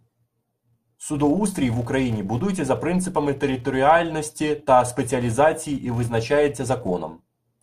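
From start to finish, the speech carries a fault of the filter restarted on every block type. The processing works in short blocks, and the filter loses its memory at each boundary. Every block starts again from silence, so each one opens with a small transient. These clicks arrive 200 times a second, which points to blocks of 5 ms. Together they form a steady 200 Hz buzz. It grows louder as the speech gets louder and fades in the quieter gaps.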